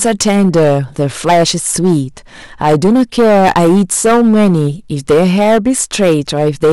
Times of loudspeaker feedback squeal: none

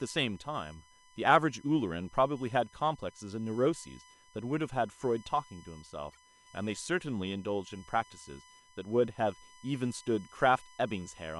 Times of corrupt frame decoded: 6.11-6.17

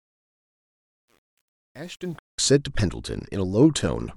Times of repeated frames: none

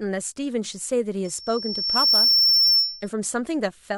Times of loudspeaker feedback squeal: 1.24-3.09

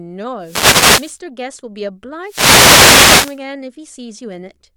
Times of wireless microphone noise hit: 0.40-1.20, 2.23-3.41

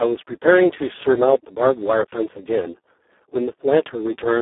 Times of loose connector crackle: none

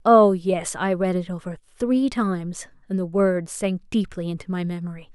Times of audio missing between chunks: none

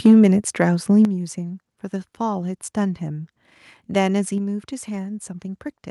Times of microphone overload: 0.05-0.27

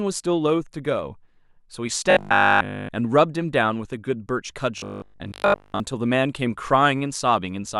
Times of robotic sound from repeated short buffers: 2.11-2.91, 4.78-5.80

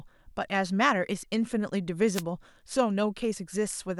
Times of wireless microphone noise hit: 2.13-2.23

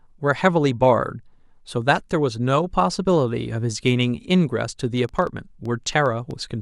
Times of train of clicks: 4.97-6.32

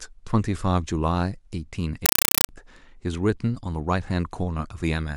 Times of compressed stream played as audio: 2.06-2.49

